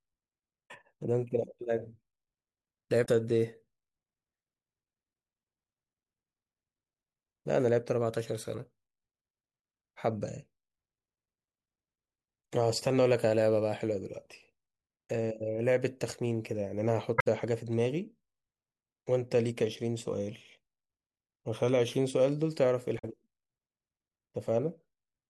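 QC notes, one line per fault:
0.64–0.71 s, 3.02–3.08 s, 15.04–15.10 s, 17.18–17.27 s, 22.95–23.05 s: damaged data in a compressed stream. Corrupted frames in the speech stream are misdecoded as brief disruptions lasting about 65 to 95 ms while the decoder regains sync, showing as short disturbances on the spectrogram and in the waveform.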